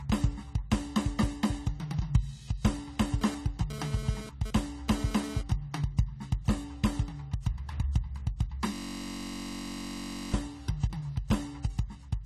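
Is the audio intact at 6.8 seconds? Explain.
No. At 6.8 seconds the music is dull and smeared, with a warbling, fizzy texture on sustained tones, and this runs through the whole clip. Nothing sounds above 14 kHz. The likely cause is heavy AAC compression, where coarse quantisation removes the top band and leaves spectral holes. The damage fits a low bitrate near 32 kbps.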